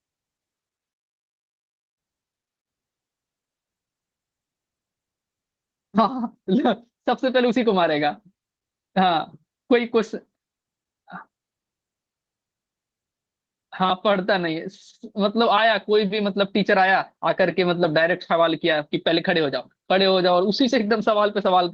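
No technical faults are present in the speech, which carries the light, fullband character of Opus voice compression in its hybrid mode, consistent with a bitrate of around 20 kbps.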